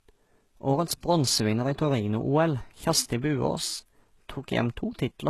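A speech recording with content that stops dead at about 12.3 kHz for its whole length, and with the smeared, watery artefacts of a very low-bitrate encoding. This is low-bitrate audio saved at a high bitrate: the character fits an HE-AAC stream of around 16 kbit/s that was likely re-encoded later as a 320 kbit/s MP3. The large second file keeps the first codec's losses and its cut-off, adding almost nothing, and cannot restore what was discarded.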